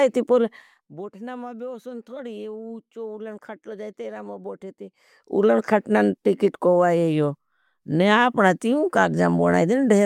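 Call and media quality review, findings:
No audible defects found in the speech; nothing to action.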